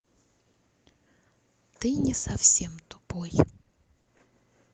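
From 3.63 to 4.21 s, the speech breaks up with repeated packet loss and a robotic sound. Four short holes, the longest 20 ms, are patched by stretching the preceding sound. About 80 ms is filled this way, giving a choppy texture with pieces missing. The audio tops out near 8 kHz.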